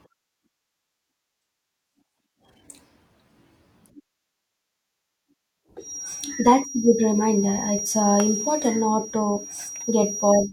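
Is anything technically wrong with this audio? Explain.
Yes. From 5.78 s to the end at 10.53 s the speech carries a feedback whistle: a thin, steady tone at 5.7 kHz, roughly 10 dB below the voice and swelling and fading slowly in level. This is likely a loudspeaker-to-microphone loop held just at the edge of feedback.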